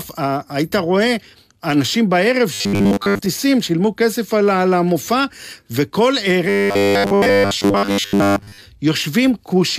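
From 2.53 to 3.26 s and 6.49 to 8.61 s, the speech becomes a rigid metallic buzz at 100 Hz: robotic sound from repeated short buffers, likely a 10 ms slice looped over skipped audio. Spectrograms show evenly spaced 100 Hz harmonics, and the waveform shows identical 10 ms cycles.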